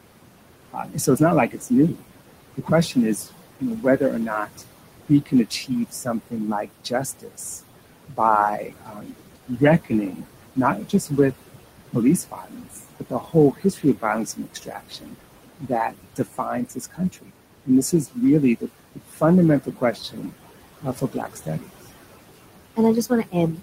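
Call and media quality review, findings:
Noise suppressor artifacts, whole clip. Room noise, about 12 dB below speech, is pulled down about 21 dB in gaps and returns under speech. Per-frame band gating of that steady noise.

Speech cut by the noise suppressor at 0.71–7.39 s (about 2 s affected), 8.08–11.32 s (about 1.5 s), 11.91–21.76 s (about 4 s) and 22.36 s to end. Soft consonants and endings misread as noise. Drops of about 19–22 dB.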